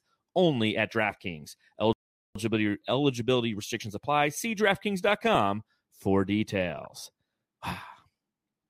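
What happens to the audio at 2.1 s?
At 2.1 s the speech is in the middle of a playback stall. The output drops to silence at 1.93 s, mid-flow, and nothing is heard until 2.35 s, a gap of roughly 426 ms. The cause is likely a player that ran short of buffered data or had its audio thread blocked, so it had nothing to send to the output until it recovered. The speech then resumes abruptly after the dead interval.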